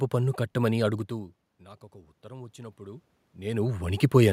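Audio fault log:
1.09–3.95 s, automatic gain rising: Right after "పన్ను కట్టమని" the level at the microphone falls by about 21 dB as the talker moves away, and the automatic gain control responds by slowly raising its gain by about 6 dB over nearly three seconds. Because the gain acts on the whole signal, the voice and the room noise swell upward together rather than the voice alone recovering.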